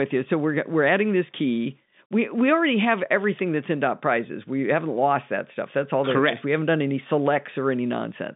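Speech carried over G.711 telephone coding, band-limited to about 150 Hz to 3.7 kHz with nothing above 3.8 kHz, and no faults to report.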